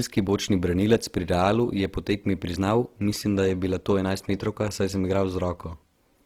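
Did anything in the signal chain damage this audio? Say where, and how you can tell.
Yes, at the codec: the speech is grainy and rough throughout, and a spectrogram shows noise-filled upper bands, likely from Opus compression at a rate around 16 kbps.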